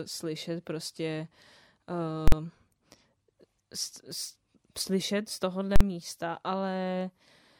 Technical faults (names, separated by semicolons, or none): invalid numbers at full scale